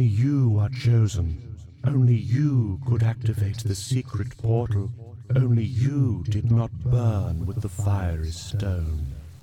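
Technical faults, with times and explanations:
7.07–9.43 s, low bit depth without dither: likely undithered truncation to about 8 bits leaves signal-following error roughly 40 dB down, so quiet passages turn grainy and gritty.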